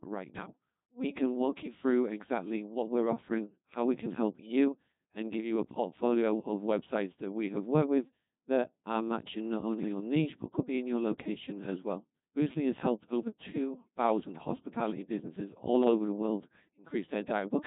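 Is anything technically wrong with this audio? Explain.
Yes. The whole speech clip sounds robotic and buzzy, with nothing above 3.8 kHz. This is the Codec 2 vocoder, rebuilding speech from pitch and envelope sine waves, which fits about 2.4 kbit/s.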